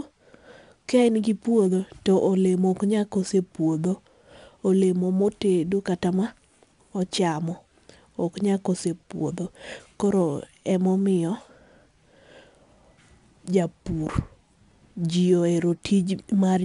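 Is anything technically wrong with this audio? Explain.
Yes. 4-bit ADPCM compression runs through the whole speech clip. Each sample is coded as a coarse 4-bit step from a prediction, so gritty hiss rides on every loud syllable and attacks smear. A spectrogram shows a noise floor rising with level and nothing above 10.6 kHz, which fits a 22 kHz sample rate.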